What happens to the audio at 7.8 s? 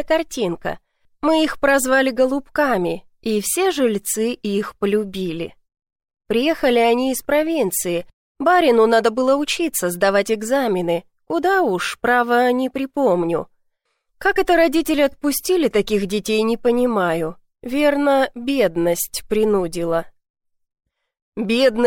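Nothing goes wrong at 7.8 s; the audio plays through that moment intact.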